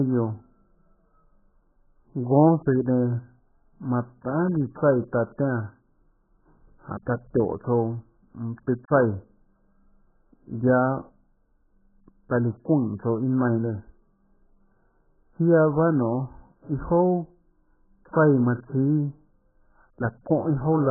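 From start to finish the speech carries heavy AAC compression damage, likely from AAC-LC at a very low bitrate, around 8 kbps. Nothing survives above 1.7 kHz, so the sound is dull and boxy, sibilants are smeared, and sustained vowels warble with a fizzy, watery texture. A spectrogram would show a hard ceiling at 1.7 kHz with empty space above, plus patchy holes and blurred, blocky smearing in the remaining bands.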